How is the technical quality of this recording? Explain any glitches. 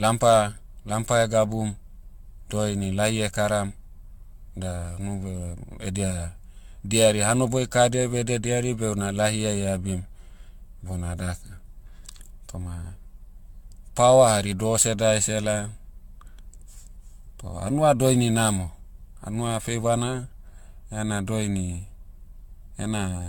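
The technical quality is poor throughout the speech. Generation loss, likely from re-encoding around seven times with an AAC-style codec near 96 kbit/s, leaves swirly, hollow, smeared sound, blurred consonant attacks, and nothing above 17 kHz.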